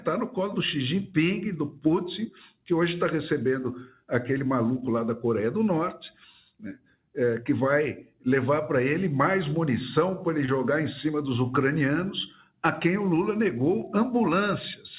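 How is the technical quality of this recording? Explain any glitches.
The recording has three brief dropouts that were patched over, heard through a narrow telephone-style band with nothing above 4 kHz, which fits G.711 mu-law at 64 kbps.

Short concealed packet loss occurs at 4.38 to 4.42 s, 10.46 to 10.50 s and 13.82 to 13.85 s. In each case about 20 ms of audio arrived too late, and the receiver extended the preceding sound before blending back. The result is a quick smear or wobble.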